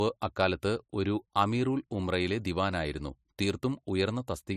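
From start to finish, the speech has nothing above 14.1 kHz. The top end is cut off flat. Two kinds of coding damage sit on top of each other. The artefacts of both codecs are heard together. This points to transcoding between lossy codecs, likely MP3 at a low rate and then AAC-LC near 48 kbit/s. The second codec spent its bits copying the first one's artefacts and added its own.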